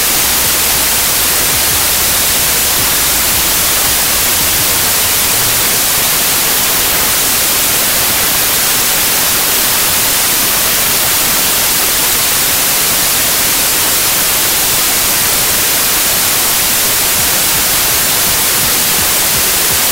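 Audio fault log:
throughout: wrong sample width. The stream was written as packed 24-bit integers but read as 32-bit integers, so each value takes four bytes that straddle three-byte sample boundaries. Most values combine mismatched bytes, and only some keep the top bits of the true signal. The result is loud broadband noise with the original buried in it. Fewer samples are recovered, so playback runs about 1.33 times faster and higher in pitch.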